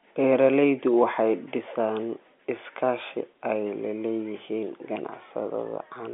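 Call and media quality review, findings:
No faults found. Normal G.711 telephone-band audio.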